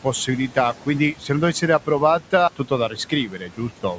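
Throughout the clip, a noise suppressor is pulling down the bands it judges to be steady noise, cutting the room noise by about 12 dB. That room noise, sitting about 18 dB below the speech, drops away in the gaps and comes back up under the talking, so the background pumps with the voice.

From 2.89 to 3.6 s, the suppressor mistakes parts of the speech itself for noise and turns them down with the background, by up to about 10 dB. Roughly a third of a second in total is affected, and those stretches sound swallowed and faint.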